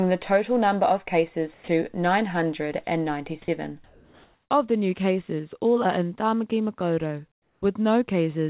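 At 1.54 s the speech cuts out for about 140 ms, and roughly 50 ms of actual sound is simply missing before it returns at 1.68 s. The same thing happens again at 3.42 s, a shorter 60 ms gap ending at 3.48 s, again losing about 50 ms. Both are sound dropped by the voice detector. The sender likely treated the sound as background and stopped transmitting, and the receiver filled the hole with steady noise until the detector picked up again.

From 3.84 to 4.5 s the pause between phrases changes character. The background, which sits about 40 dB below the loud parts, turns into a flat, featureless hiss about 3 dB quieter. That's comfort noise in place of the background: with transmission likely paused during the silence, the receiver synthesises a rough stand-in for the room sound. At 7.32 to 7.62 s it happens again. The background, about 45 dB down, drops by about 9 dB into smooth noise. All of this sits inside narrowband call audio with nothing above 4 kHz, which points to a G.711-type codec.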